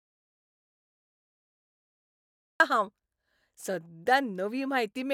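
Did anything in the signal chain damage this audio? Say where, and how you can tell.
Yes. The audio dropout to silence is already in progress when the clip opens and lasts until 2.6 s, when the speech starts abruptly mid-flow. The gap is silent with no room tone or hiss, which is what separates it from a natural pause or a noise gate, since either would leave some floor. The likely cause is a lost input at the device or link stage while the recorder kept writing silence.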